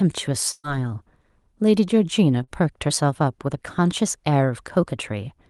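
From 0.51 to 0.66 s, a burst of packet loss drops about 120 ms of speech; the receiver stretches the last sound and fades it out, then briefly silence.

At 2.44 to 2.50 s, a short concealed packet loss leaves a 40 ms hole, which the decoder patches by extrapolation, heard as a quick smear or wobble.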